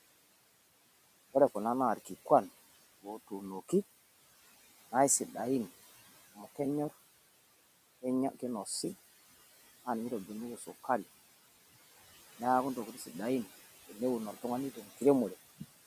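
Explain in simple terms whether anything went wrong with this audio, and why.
A noise suppressor was working on this speech the whole time, lowering anything it judged to be steady background noise. Those noise suppressor artifacts show up as room noise that sinks in the pauses and swells back under the talking.

Around 10.57 to 10.68 s, the same noise suppressor mistook part of the speech for noise and turned it down. This speech cut by the noise suppressor lasts about a tenth of a second, and that bit sounds swallowed and faint.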